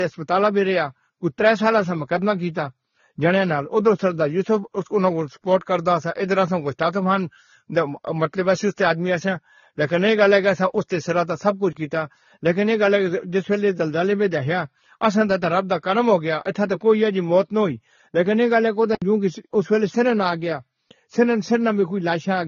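The speech is band-limited from start to finish. Nothing is heard above about 6.9 kHz, so sibilants sound dull and clipped. The artefacts are layered. The different codec artefacts are heard together. This mix of textures points to transcoding between lossy codecs. The likely chain is a low-rate AAC encode, around 24 kbit/s, re-encoded as Vorbis at around 32 kbit/s. The second codec spends its bits on the first one's damage. The lowest cut-off survives.

From 11.73 to 11.75 s there is a block of digital silence. The signal drops straight to silence for about 23 ms and returns with no fade, so it sounds like a short hole. The length fits a 1024-sample block.

From 18.95 to 19.02 s a second block of digital silence cuts out about 70 ms. It is heard as a short hole.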